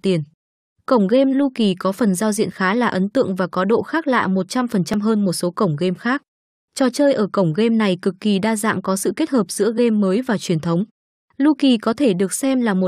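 At 4.94 s, just before "hơn một số cổng", an overlap between stream segments trims about 10 ms of speech, so the waveform jumps ahead without the gap of silence a dropout leaves.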